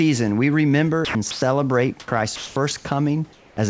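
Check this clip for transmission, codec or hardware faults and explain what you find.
Yes, voice-detector faults appear in three forms, heard over a call path whose band stops at 8 kHz, which fits a wideband G.722-style codec.

Sound dropped by the voice detector, 1.05–1.15 s after "we remember" and 1.31–1.42 s: speech vanishes into steady hiss, likely from the detector misjudging the sound as background. On the spectrogram, harmonics abruptly give way to flat noise.

Comfort noise in place of the background, 2.00–2.08 s, 2.36–2.56 s and 3.33–3.57 s: the real room noise is likely swapped for synthetic fill, shifting level by about 1 dB down, 3 dB up and 4 dB down. It shows as smooth, featureless texture.

Onset clipped by the voice detector, 2.05–2.08 s: the first 30 ms are missing, likely because the detector reacted late. The waveform starts abruptly with no soft rise.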